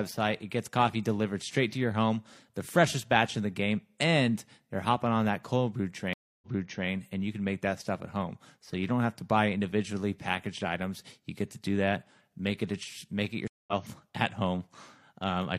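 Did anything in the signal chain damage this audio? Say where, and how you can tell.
Yes. Stream reconnect at 6.13–6.88 s and 13.48–13.73 s, in the network stage. A dead silence of 284 ms, then 198 ms, follows each break before a fresh decoder fades in elsewhere: 464 ms earlier the first time, repeating audio, and roughly 150 ms later the second, skipping some.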